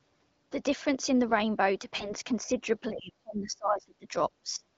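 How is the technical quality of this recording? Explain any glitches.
The speech is marred by two recurring problems, heard through a wideband HD Voice connection whose coding adds only light roughness.

AMR bit errors occur at 1.95 to 2.14 s and 3.80 to 3.92 s. Corrupted frame bits misplace excitation pulses, so the speech turns scratchy and gargly while keeping its pitch.

The speech dips or drops out at 2.37 to 2.66 s (about 10 dB), 2.91 to 4.16 s (about 30 dB) and 4.43 to 4.64 s (about 20 dB). This is likely speech suppressed in double talk, where an echo canceller turned the talker down.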